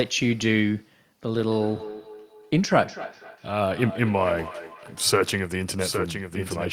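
Feedback echo between two devices runs from 1.45 s to 5.22 s in this speech clip. Each word returns at a steady interval of roughly a third of a second, at most about 14 dB below the speech, with the repeats sounding thinner and more ringing each time. This happens when two devices in the same room share a call: one plays back what the other's microphone sent, and that microphone picks it up again. Each echo canceller removes only its own device's playback, so the loop keeps circulating. A doubled audio track begins at 5.71 s and continues to the end. A second full-band copy of the speech follows around 0.7 s behind, only a few decibels quieter, with no decay or room colour, and it starts abruptly. The likely cause is the same audio being mixed in twice, either captured again through a slower path or left as two out-of-step copies by an edit.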